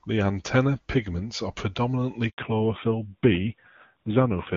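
At 2.30 s, after "antenna pigments are predominantly", a handover gap cuts the speech to 80 ms of silence as the call switches networks, with no warbly concealment as packet loss would have. From 2.38 s on, fallback to narrowband removes everything above 4 kHz. The crisp AMR wideband sound turns dull and rough, and it stays that way instead of passing as a brief muffle.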